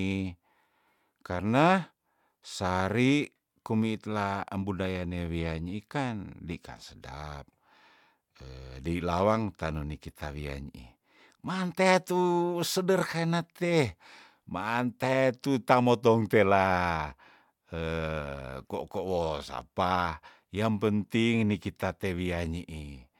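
No technical faults are audible.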